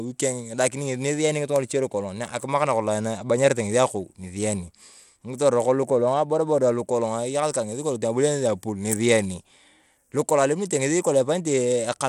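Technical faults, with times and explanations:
Throughout, Bluetooth SBC compression: the speech carries a plainly audible gritty grain and flickering treble, likely from coarse sub-band quantisation, which fits a bitrate near 96 kbps. Content still reaches 20.1 kHz, so unlike a plain low-pass, the damage is grit and flickering treble rather than a fixed cutoff.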